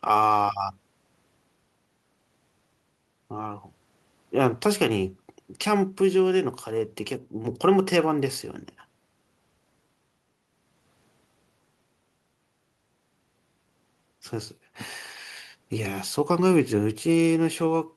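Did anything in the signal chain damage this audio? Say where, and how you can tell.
No, nothing in the signal chain damaged this audio.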